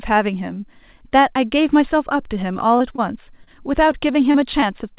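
Short concealed packet loss hits the speech at 2.78, 2.92, 2.96, 3.44, 3.92, 4.32 and 4.60 s. Each time about 20 ms of audio never arrived. The receiver extended the preceding sound, then blended back, leaving brief smears or wobbles in band-limited audio that stops at 4 kHz.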